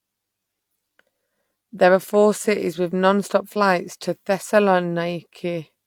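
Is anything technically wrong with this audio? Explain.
No, nothing technically wrong turns up in this speech recording; it all sounds just as it should.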